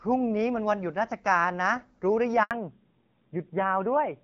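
At 2.43 s the speech cuts out in a handover gap. The call is being passed from one network link to another. No speech frames get through during the switch. The sound fades within a few tens of milliseconds and then goes silent. The silence lasts 80 ms, until 2.51 s, when the new link starts. Whatever was said in that stretch is gone. It is heard as a short, clean dropout.

From 2.51 s to the end, there is a fallback to narrowband. Before the gap, the call carries HD Voice, with light coding damage that fits AMR-WB at about 12.65 kbit/s. After the gap, everything above 4 kHz is missing. The voice loses its crisp upper range and sounds muffled and duller. It is also rougher and grainier, which fits a lower-rate narrowband codec such as AMR-NB at 7.4 kbit/s.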